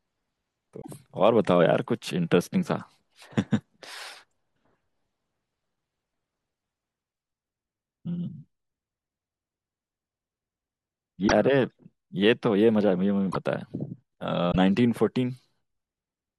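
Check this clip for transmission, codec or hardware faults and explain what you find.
Four short glitches break up the speech, at 0.81 to 0.89 s, 11.27 to 11.32 s, 13.31 to 13.36 s and 14.51 to 14.56 s, each a brief chirp, noise burst or gap where the audio skips forward. The likely cause is a broken MP3 bit reservoir. After frames go missing, the next frames look back for data they had stored earlier and decode bytes belonging to other frames. Each disturbance spans roughly two to four 24 ms frames.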